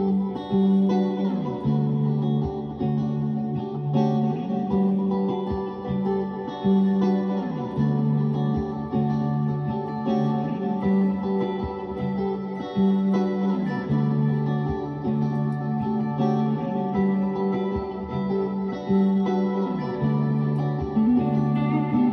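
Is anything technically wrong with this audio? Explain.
No, the audio shows no technical faults; the signal stays intact throughout.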